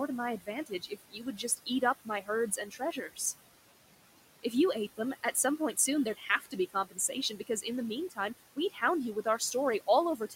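A speech recording with noise suppressor artifacts running through all of it. The suppressor pulls steady background down by about 17 dB, frame by frame. The room noise, which sits about 16 dB below the speech, sinks in the gaps and swells back under each phrase.

There is also speech cut by the noise suppressor. It mistakes parts of the voice for noise and turns them down with the background. The worst stretch runs from 0.4 to 3.19 s. There, under a second of speech in total is dimmed, by up to about 18 dB. Just after "you ate", between 4.97 and 6.98 s, nearly half a second is swallowed, by up to about 15 dB. Shorter dips of about a tenth of a second each fall at 7.31 to 7.65 s (about 13 dB) and 8.56 to 8.82 s, just before "you with" (about 12 dB). The last comes right after "you with", at 9.8 to 10.35 s (about 10 dB). In these spots consonants and word endings go faint.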